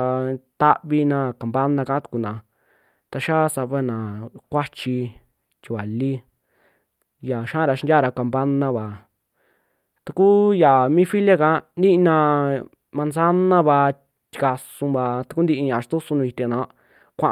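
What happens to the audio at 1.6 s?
At 1.6 s the speech is affected by channel delay (comb filtering), which runs through the whole clip rather than starting there. One channel lags the other by only a few samples, a fraction of a millisecond, and when the two are summed to mono the shared content cancels at evenly spaced frequencies, the first near 7 kHz. The speech sounds dull and slightly hollow, lacking top-end air. A spectrogram would show a steady horizontal dark band around 7 kHz; the waveform looks normal.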